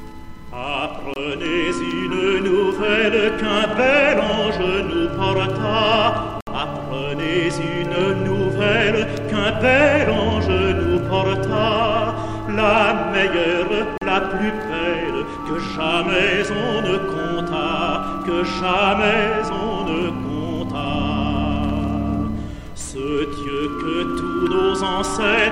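Brief dropouts to silence at 1.14 to 1.16 s, 6.41 to 6.47 s and 13.98 to 14.02 s: likely Bluetooth stalls, the headphone buffer emptying while delayed packets were resent.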